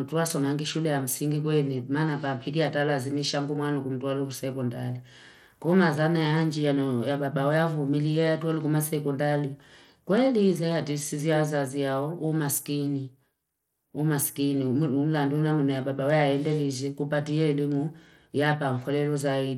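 From start to finish the speech carries plainly audible codec damage: the upper treble thins out and flickers in and out, and a gritty roughness rides on the voice. The likely cause is Bluetooth SBC compression at a small bit pool, which fits a rate around 96 kbps, starving the top sub-bands and coarsely quantising the rest. Unlike a clean low-pass, the highs wobble rather than stop cleanly, with grainy noise instead of smeared pre-echo.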